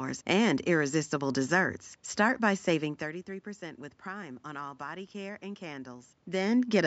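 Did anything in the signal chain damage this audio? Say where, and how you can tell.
No, nothing in the signal chain damaged this audio.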